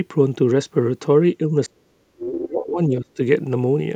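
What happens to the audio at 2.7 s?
At 2.7 s the speech is inside a stretch of speech suppressed in double talk, running from 1.55 to 3.19 s. The level keeps dipping, at its deepest by roughly 35 dB. The speech thins and breaks up in pieces for about one and a half seconds in total. The likely cause is an echo canceller hearing both sides at once. It could not tell this talker from loudspeaker echo, so it turned everything down.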